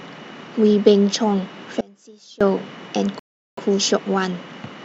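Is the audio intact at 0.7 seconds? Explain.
Yes, the audio is intact at 0.7 seconds, with no fault to be heard at that moment.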